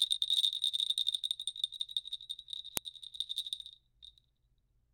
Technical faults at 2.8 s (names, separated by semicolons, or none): file header played as audio